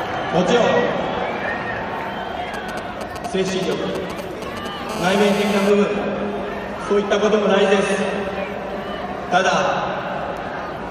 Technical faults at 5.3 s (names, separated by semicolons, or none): GSM phone buzz